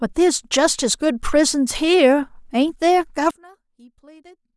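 Speech recording. From 3.31 s to the end at 4.57 s, the centred voice collapses by about 27 dB, leaving only a faint residue. This is likely one channel inverted, so the identical content in both channels cancels on mono summation.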